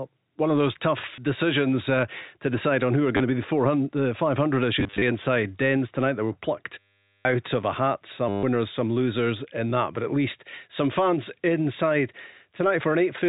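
Packet loss with the last packet repeated occurs at 1.16 to 1.18 s, 3.17 to 3.20 s, 4.80 to 5.02 s, 6.79 to 7.25 s and 8.29 to 8.43 s. Whenever packets failed to arrive, the receiver replayed the previous one until fresh audio came. The gaps suggest 10 ms packets. The joins rarely match the pitch cycle, so they can click.

The two brief losses, 20 ms and 30 ms, sound like short robotic stutters. Between 4.80 and 5.02 s, 140 ms goes missing in short runs of up to 30 ms, scattered through that span, which gives a broken, stuttering texture. The longest event, 460 ms from 6.79 s, and the 140 ms run from 8.29 s become a robotic stutter that buzzes or flutters at the packet rate, which fits about 100 Hz.

All of this sits on top of the telephone band of G.711 A-law coding.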